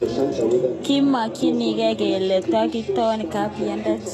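Throughout, the speech likely passed through HE-AAC compression at a very low rate, around 16 kbps, with treble rebuilt from copied lower bands. Nothing remains above 12.3 kHz, and s sounds come out plainly gritty and lispy, with a metallic edge.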